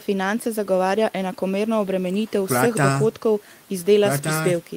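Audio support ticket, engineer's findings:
No faults found.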